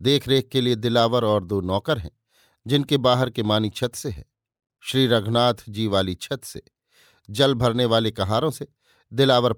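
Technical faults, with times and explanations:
No technical faults are present in this clip.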